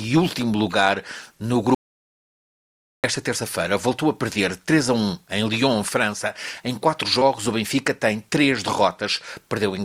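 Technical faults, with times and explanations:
1.75–3.04 s: audio dropout to silence. The sound cuts out completely for about 1.3 s, with no room tone. The input was likely lost while recording continued.
7.19–7.23 s: short concealed packet loss. About 20 ms of audio arrived too late. The receiver extended the preceding sound, leaving a brief smear before rejoining.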